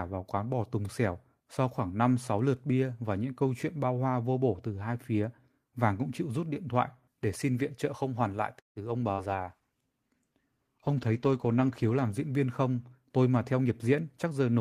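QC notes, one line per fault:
8.59–8.79 s, call audio freeze: after "trợ không hoàn lại" the speech stops for about 0.2 s. The last sound is stretched into a brief buzz that fades to silence for roughly 140 ms. A jitter buffer that ran empty while packets were held up is the likely cause. Speech then carries on from where it stopped, so nothing is lost. The call just picks up about 165 ms of extra delay.
9.12–9.21 s, burst of packet loss: around 60 ms of audio never arrived in time to be played. The receiver covers the gap by carrying the last sound forward and letting it die away. Speech then resumes further on, with that piece of the sentence missing.
9.34–12.24 s, call bitrate drop: the bandwidth estimate fell and the encoder went from 32 kbps down to 15 kbps, staying at the lower rate for about 2.8 s. The coarser coding makes the speech sound rougher and duller, with the top end trimmed. 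Full quality comes back before "viên không".
12.85–14.36 s, jitter buffer speed-up: after "viên không" the buffer held more audio than its target. The receiver trimmed small pitch-period slices again and again, taking out roughly 150 ms in total. As a result the speech runs about 9% fast at unchanged pitch and sounds hurried.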